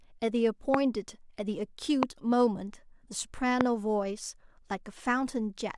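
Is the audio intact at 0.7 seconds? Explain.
No. A loud pop sits on the speech from 0.74 to 0.76 s, a single sharp burst roughly 20 dB above the surrounding level while the speech continues beneath it. Its likely cause is a brief voltage spike, such as a plug, switch or static discharge, reaching the signal path and being shaped by the downstream circuitry. On a waveform it shows as one tall, narrow spike. On a spectrogram it appears as a thin vertical stripe spanning all frequencies.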